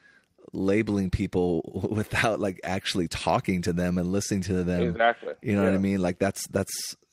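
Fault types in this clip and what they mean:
Nothing stood out on listening to this speech recording.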